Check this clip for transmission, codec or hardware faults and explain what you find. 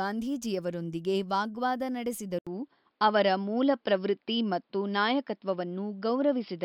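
One fault is audible. From 2.39 s to the end, after a brief gap of 80 ms, the speech suddenly turns dull and boxy, with nothing above 5.4 kHz, a level shift of around 5 dB, and a faint new noise floor well below the speech. The likely cause is the input switching to a poorer device, such as another microphone or a headset's call profile, whose narrower band, different level and own background noise replace the original microphone's.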